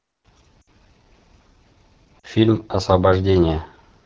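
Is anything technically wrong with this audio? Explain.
Yes. Throughout, the AMR wideband (HD Voice) codec runs at about 8.85 kbit/s, near its lowest mode, so the vocal tract model is starved and the speech sounds plainly rough and raspy.

Lost AMR speech frames occur at 0.61 to 0.68 s and 2.19 to 2.27 s. The decoder replays the last good settings with fading gain, giving brief smeared dropouts of roughly 60 ms and 40 ms.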